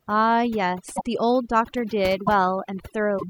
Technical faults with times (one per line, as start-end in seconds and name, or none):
0.00-3.29 overdone noise removal
0.95-1.01 broken MP3 bit reservoir
2.26-2.29 broken MP3 bit reservoir
3.18-3.23 broken MP3 bit reservoir